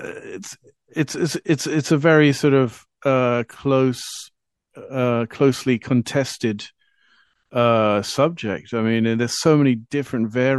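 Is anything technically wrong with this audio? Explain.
Yes. Throughout the speech the audio has a watery, swirly quality: sibilant s sounds turn metallic and chirpy, and consonant attacks smear. This is likely MP3 compression, with damage that is plainly audible and fits a low bitrate around 64 kbps. With so few bits, the encoder zeroes quieter spectral lines, which flicker on and off between frames and produce the warbling texture.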